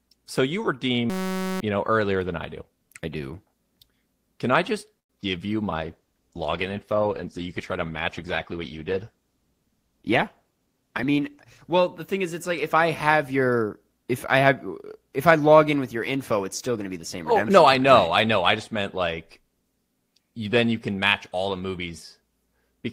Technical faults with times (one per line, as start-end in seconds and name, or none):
1.10-1.61 system hang loop
4.99-5.11 call audio freeze
5.21-5.25 short concealed packet loss
5.84-12.18 call bitrate drop
10.08-11.11 jitter buffer speed-up